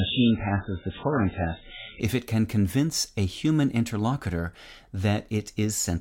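For the first 2.0 s the speech sounds dull and smeared, with nothing above about 3.8 kHz and a watery, swirling codec texture. At 2.0 s, just before "if it can convince", the treble and clarity return at once, with no gap. This is an adaptive stream starting at a low bitrate: the player began on a cheap version to start quickly, one that fits roughly 8 kbit/s MP3, then switched up, consistent with 128 kbit/s, after measuring the connection.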